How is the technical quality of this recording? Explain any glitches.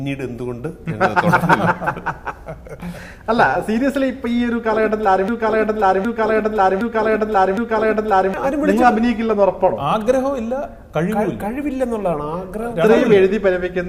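There's one clear glitch, a broken-record loop running from 5.28 s to 8.34 s. A fragment about 0.76 s long plays four times back to back, each pass identical, so the sound stutters in a rigid cycle and then moves on. That kind of exact repetition most likely comes from the player, encoder or stream stalling and re-sending the last chunk it had buffered. Whatever should have played during those three seconds is gone.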